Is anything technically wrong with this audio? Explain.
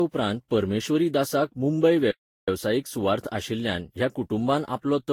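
Yes, there are two faults.

Throughout, the speech sounds swirly, hollow and smeared, with blurred attacks and no content above 19.2 kHz. This is likely generation loss from roughly seven lossy re-encodes at around 64 kbit/s.

From 2.11 to 2.48 s, the speech cuts to silence for about 0.37 s and then resumes. This is a playback stall, likely caused by the player running short of data.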